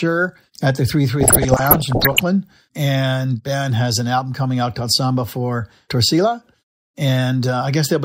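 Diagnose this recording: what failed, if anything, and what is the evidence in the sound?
DAB burbling at the codec stage, 1.21 to 2.20 s: 42 frames hit at roughly 1% bit error rate, as bit errors corrupt MP2 scale factors, making single sub-bands jump in level.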